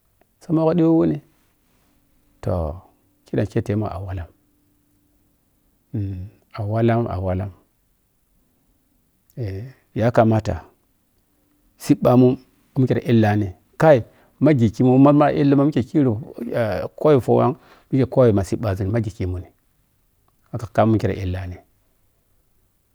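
No technical faults can be heard anywhere in the recording.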